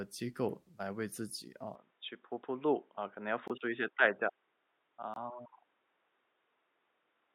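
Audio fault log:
1.75–7.34 s, input switched to a poorer device: speech abruptly loses everything above 3.8 kHz and turns dull, with a faint new noise floor but no gap or level jump, likely from a change to a narrower-band microphone.
3.48–3.51 s and 5.14–5.18 s, corrupt frame muted: each is a sudden 34–36 ms hole of silence, about one frame long, where the decoder rejected a damaged compressed frame and left silence in its place.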